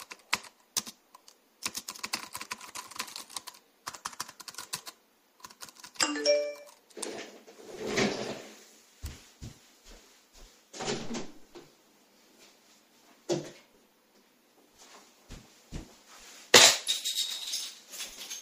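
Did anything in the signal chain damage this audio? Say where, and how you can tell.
Yes. At the driver or buffer stage, new audio missed its deadline twice, so the output replayed its last block, a repeated buffer. At 7.74 s and 11.36 s, a tiny chunk of about 2.7 ms loops back-to-back with hard joins. That is short enough to sound like a brief click or buzz rather than a stutter, and fits a 128-sample buffer.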